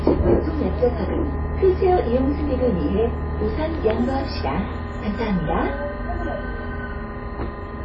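Everyday sounds carry plainly audible codec damage throughout: a ringing, washy texture with hiss that breathes with the signal, and nothing above 8.1 kHz. This is likely WMA compression, where long transform blocks smear quantisation noise and the low-pass fits a bitrate near 32 kbps.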